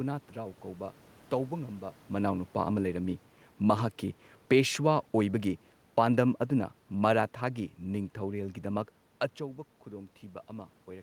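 From 3.55 s to 8.12 s the speech sinks by about 5 dB, and the room noise sinks with it, a sign of automatic gain falling: the gain control judged the input too loud or its background noise too strong and eased its gain down gradually. The level changes near 2 s and 9 s come from the talker moving.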